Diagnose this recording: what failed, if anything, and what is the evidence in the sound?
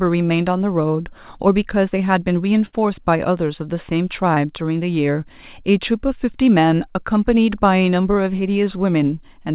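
Network stage, burst of packet loss from 2.66 to 2.79 s. The receiver extends the last sound for about 65 ms, fading it down, then about 60 ms of the speech is simply gone before audio resumes further on. Several consecutive packets arrived too late or never arrived.

Network stage again, a short concealed packet loss at 4.34 to 4.38 s. Roughly 20 ms never reached the decoder, so it synthesised a continuation of the preceding sound and crossfaded back, leaving a brief smear in the speech. The band-limited sound, with nothing above 4 kHz, is consistent with a G.711 call path.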